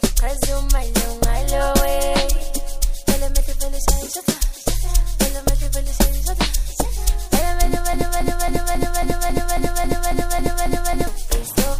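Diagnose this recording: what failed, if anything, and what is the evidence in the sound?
Broken-record loop, 7.93 to 11.07 s: one 0.27 s fragment repeats twelve times back to back, likely a stalled playback buffer resending its last chunk.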